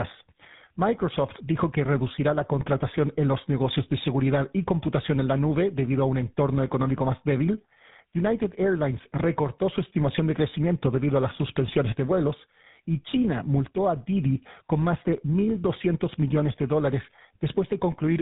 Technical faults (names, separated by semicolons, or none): tandem speech coding